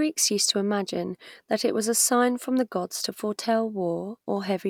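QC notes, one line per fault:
No technical faults are present: the signal level, continuity and timing hold steady across the whole clip.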